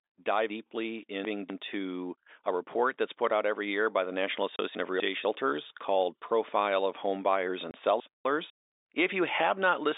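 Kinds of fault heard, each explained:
Chunks out of order: Three jumbled moments, around 0.5 to 1.5 s, 4.75 to 5.25 s and 8.0 to 8.5 s, where the speech jumps. Blocks of 250 ms were played late, once by three blocks and twice by one, so nothing is lost but the order is scrambled.
Packet loss filled with silence: Two brief dropouts, at 4.56 s and 7.71 s, each a 30 ms hole of dead silence. Each gap fits a single lost packet that the receiver replaced with silence instead of concealing it.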